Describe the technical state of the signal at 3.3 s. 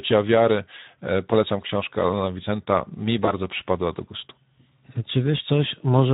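Right at 3.3 s you're inside a bit of VoIP packet loss concealed by the speech codec, running from about 3.25 to 3.33 s, just before "przypadła do gustu". What sounds like a single 20 ms packet went missing, so the decoder kept reusing its last pitch and filter at falling gain. You hear a short buzzy tone or coloured noise that fades. Because each frame is built on the last, the sound stays weak and off for tens of milliseconds after the gap itself.

Underneath that, the whole clip carries plainly audible Speex codec damage, consistent with a rate around 11 kbps. At that setting the CELP coder doesn't have many bits for the excitation, so the speech comes across hoarse and grainy with a noisy edge.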